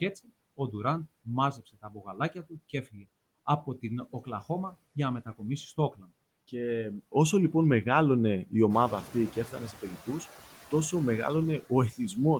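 Noise suppressor artifacts run through the whole clip. The suppressor treats steady background noise as something to remove in each frequency band, frame by frame, cutting it by about 19 dB. As a result, the noise floor drops away in the gaps and comes back up beneath the speech.

Speech cut by the noise suppressor occurs from 5.77 to 6.03 s, just after "για να μετακομίσει". Here the suppressor mistook part of the speech for noise and turned it down by up to about 10 dB. About a tenth of a second of sound is affected, and it comes across as swallowed and faint.

Noise suppressor catching up follows from 8.69 to 9.11 s, between "όσο λοιπόν μεγάλωνε η" and "και έφτανε σε". The room noise jumps by about 11 dB at around 8.5 s and then sits about 17 dB below the speech. The suppressor's noise estimate lags behind this change, so for 420 ms the louder noise is reduced by only about 6 dB before it sinks back down.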